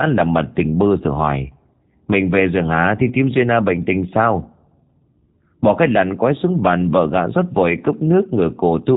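From start to finish the speech has passed through a G.729 codec, which fits an 8 kbit/s VoIP link. Rather than storing the waveform, the codec models it with a vocal tract filter, a pitch predictor and a few pulses per half of each 10 ms frame, and nothing above about 3.8 kHz survives. The result is plainly audible: the speech stays intelligible but sounds muffled, slightly rough and synthetic, with a buzzy, reconstructed texture.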